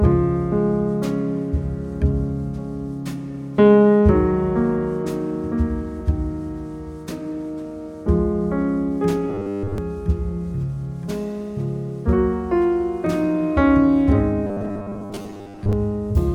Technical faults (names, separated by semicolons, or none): robotic sound from repeated short buffers